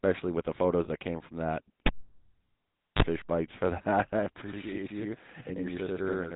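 The whole clip carries the GSM full-rate codec. The coder reduces speech to a vocal-tract filter driven by a regular pulse excitation, discarding two of every three excitation samples, and the result fits the 13 kbps full-rate scheme. The damage is plainly audible: a buzzy, gravelly grain sits on every voiced sound, and nothing above 4 kHz survives, so the top end is dull and closed.

At 0.84 to 0.87 s, after "with the" and before "that came from that", there are lost GSM frames. One 20 ms frame was bad, and the decoder filled the gap by repeating the last good frame's parameters. The gap is too short to fade out, so it sounds like a brief rough, metallic ring smeared across the join.

A second lost GSM frame follows at 4.24 to 4.28 s, just after "for that I". It is again a single 20 ms concealment with the same short metallic smear where the frame was patched over.

From 4.42 s to the end, channel delay (doubling) appears. 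One channel runs about 93 ms behind the other, which fits a 4096-sample buffer, and the two have been summed to mono. At that spacing the late copy is not absorbed into the direct sound. It is heard as a distinct slap at equal level, doubling each syllable for the rest of the clip.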